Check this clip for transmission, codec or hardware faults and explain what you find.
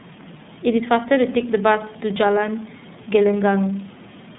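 One codec fault runs through the whole speech recording: it has passed through the iLBC codec. The system coded each 30 ms frame's excitation on its own, without drawing on the previous frame, and the narrowband channel discards everything above 4 kHz. The damage is plainly audible: the speech is dull and lacks sibilant brightness, with a slightly rough, synthetic texture from frame to frame. This fits iLBC's 13.33 kbps mode.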